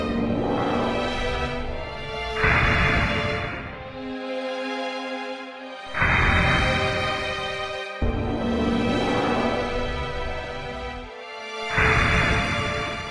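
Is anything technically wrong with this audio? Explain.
No, nothing technically wrong turns up anywhere in this audio.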